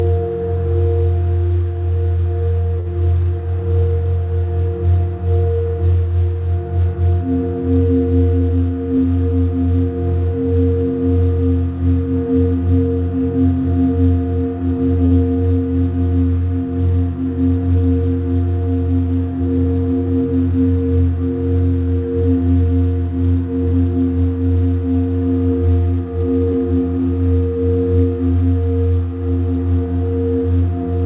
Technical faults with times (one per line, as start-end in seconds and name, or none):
2.80-2.88 short stall from a late packet
15.06-15.15 short stall from a late packet
26.52-26.56 short stall from a late packet